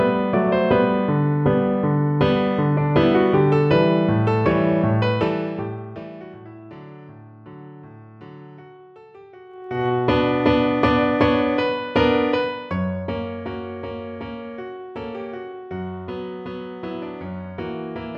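Zipper noise at 4.99–6.40 s (about 25 dB fade down), 9.47–9.88 s (about 25 dB up) and 12.29–13.59 s (about 15 dB down): unsmoothed level steps at roughly 50 per second produce a rapid ticking buzz during each change.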